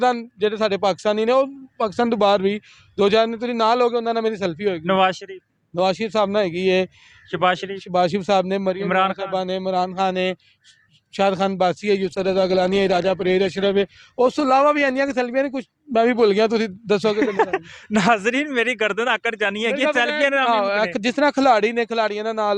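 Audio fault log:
12.03–16.49 s, call bitrate drop: the sound goes rough and watery and loses its top end, as if the encoder was pushed from a comfortable rate (something like 96 kbps) down to roughly 18 kbps after the call's bandwidth estimate collapsed. At that squeezed rate the coder quantises everything coarsely and trims the highs, so it turns muffled and smeary. It sits at its worst for about 2.4 s before clarity climbs back as the bitrate recovers.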